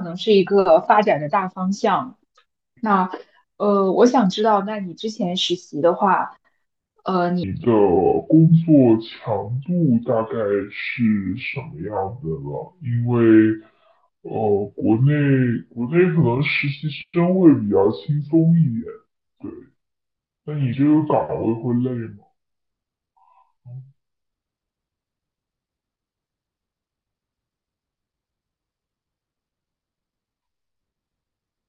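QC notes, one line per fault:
7.44–31.69 s: section at the wrong speed. From 7.44 s onward the speech runs at 0.652 times its recorded rate, so pitch and pace fall together by roughly seven semitones, sounding deep and dragged. This is likely a clock or sample-rate mismatch during playback or editing.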